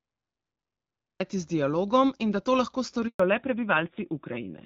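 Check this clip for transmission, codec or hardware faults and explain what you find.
Three faults are audible: a late start, a brief dropout mid-clip, and a loss of bandwidth for the last stretch.

Cut-off start, 0 to 1.2 s: the capture began late, so the clip opens with digital silence and the speech cuts in abruptly at 1.2 s, mid-sound. There is no natural onset or fade-in, just a hard entry.

Handover gap, 3.08 to 3.2 s: the call was switched between networks, and no speech frames arrived during the transfer. The voice dies away within a few tens of milliseconds and stays silent for 120 ms, and whatever was said in that window is gone.

Fallback to narrowband, 3.2 s to the end: after the handover, the call dropped from HD Voice to an older narrowband codec. Before this point the AMR wideband (HD Voice) codec is clear, with only light coding roughness consistent with 12.65 kbit/s. From here on nothing remains above 4 kHz, and the voice turns duller and rougher in a way that fits AMR-NB at around 7.4 kbit/s.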